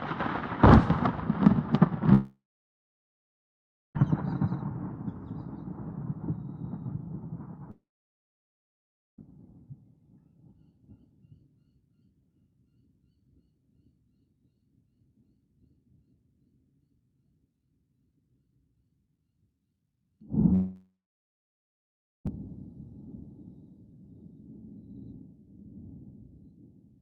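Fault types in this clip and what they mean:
Long network dropout: three gaps of 1.5 to 1.8 s, likely lost packets, each a brief fading fill, then near-silent blank spectrogram bands and a flat waveform.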